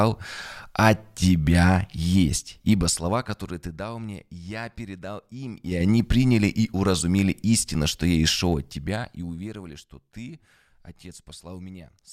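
A fine ticking rides on the speech from 2.73 to 3.93 s after "от тебя есть", 5.55 to 5.89 s before "приняли и уразумели истину", and 8.36 to 9.81 s after "истину что я и". This is zipper noise: the level drops, rises, then drops again in unsmoothed steps about ten times a second, 1 dB each on the falls and 4 dB on the rise.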